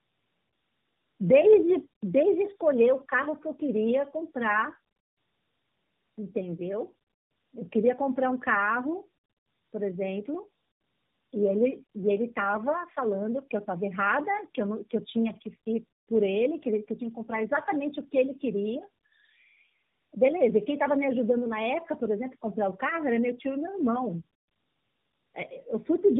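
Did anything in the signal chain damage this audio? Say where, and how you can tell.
Yes, at the codec stage, through the whole clip: tandem speech coding. The speech is band-limited to about 3.8 kHz and sounds rough, muffled and warbly, which points to three passes through an AMR narrowband coder with telephone-law G.711 links between them. Each decode and re-encode models the previous coder's errors as if they were speech, so the damage compounds. A single AMR pass at 10.2 or 12.2 kbit/s would share the bandwidth but not this layered roughness.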